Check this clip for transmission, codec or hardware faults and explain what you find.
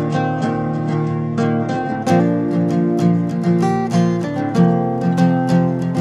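One fault is present: an adaptive stream starting at a low bitrate. From 0.0 to 2.0 s the audio has nothing above 10.7 kHz, and the upper range it does carry sounds synthetic, with stronger codec artefacts. At 2.0 s the quality jumps to a fuller, cleaner version with no gap. The player opened on a low-bitrate rendition to start quickly, with a character that points to a parametric codec around 12 kbit/s. It then switched up to a higher-quality stream, which fits roughly 96 kbit/s AAC, once it had measured the connection.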